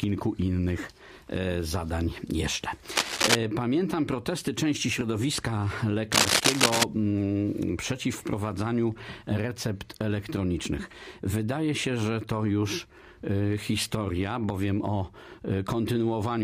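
The clip carries two bursts of cable scratch noise, from 2.91 to 3.35 s and from 6.11 to 6.84 s. Each burst is a dense, ragged crackle laid over the audio. It sits a few decibels louder than the sound itself and is heard over it for a moment. The second burst lasts longer, at about 0.7 s. The likely cause is a worn cable, connector or control being moved, with its contact resistance jumping rapidly as it shifts.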